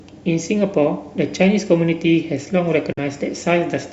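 A Bluetooth dropout hits the speech from 2.93 to 2.99 s, an abrupt silent hole. About 46 ms of audio is missing, which fits a couple of packets that likely arrived too late at the headphones and were discarded. The speech then resumes further along, as though it had kept playing.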